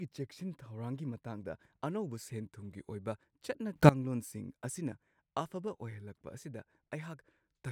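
A sudden gain jump hits this speech clip at 3.76 s: the level leaps by about 20 dB in a single step, with the background noise rising along with the speech, and the boost holds until 3.89 s before dropping back. The abrupt edges and the way noise and speech move together likely come from a digital gain setting or bit shift applied instantly, with no ramp to ease the transition.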